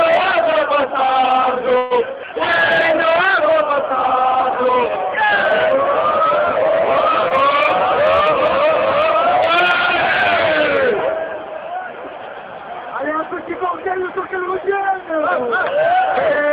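A call audio freeze runs from 1.77 to 1.93 s. The last sound is stretched into a fading buzz or hiss for about 131 ms with no drop to silence, and the audio then resumes where it stopped, 131 ms later than before and with nothing lost. The likely cause is delayed packets draining the jitter buffer. At 7.29 to 7.32 s, short concealed packet loss removes about 20 ms of audio. The decoder covers the hole by extending the preceding sound, heard as a brief smear or wobble before it blends back into the real signal.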